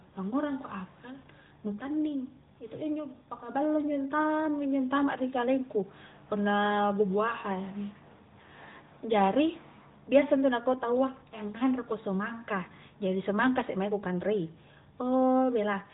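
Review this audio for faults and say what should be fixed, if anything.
Nothing needs fixing: the speech comes through intact over an AMR narrowband mobile codec path, with the expected top end stopping at about 3.8 kHz and only the light coloration that fits a 12.2 kbps AMR-NB setting.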